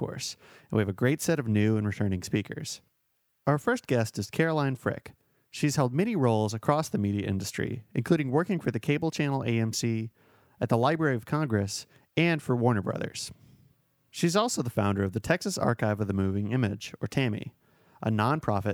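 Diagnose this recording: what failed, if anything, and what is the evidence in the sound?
Nothing failed: the speech holds steady throughout, with no audible defect at any stage of the chain.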